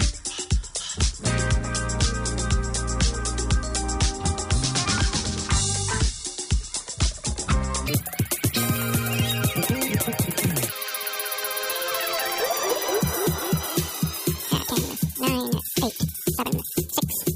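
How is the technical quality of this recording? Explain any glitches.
The recording has one serious fault. From 7.88 s to the end, a wrong sample rate makes the sound run at double speed and a full octave (12 semitones) higher. This fits audio captured around 22 kHz being played back at 44.1 kHz without conversion.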